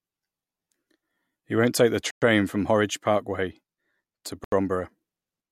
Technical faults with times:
2.11-2.22 Bluetooth stall
4.44-4.52 Bluetooth stall

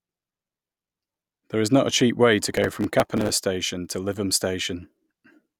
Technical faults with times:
2.47-3.30 processor overload crackle

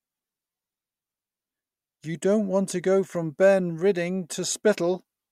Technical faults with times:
none

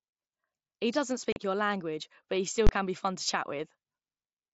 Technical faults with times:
1.32-1.36 unconcealed Bluetooth headset packet loss
2.67-2.69 invalid numbers at full scale

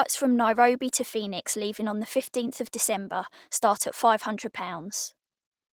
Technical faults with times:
0.00-5.73 Opus voice compression

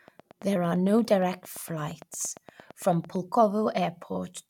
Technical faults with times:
0.08-3.17 train of clicks

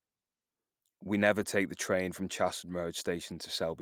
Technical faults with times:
1.41-1.43 lost packet rebuilt from error correction

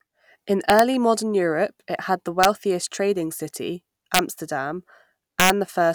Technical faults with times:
0.70-0.79 integer overflow
2.43 integer overflow
4.14-4.19 integer overflow
5.40-5.50 integer overflow

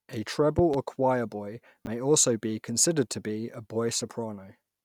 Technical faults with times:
0.59-0.76 loud pop
1.85-1.87 chunks out of order

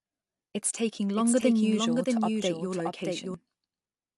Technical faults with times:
1.16-3.34 doubled audio track

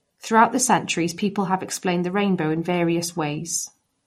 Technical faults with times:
0.00-4.07 MP3 compression

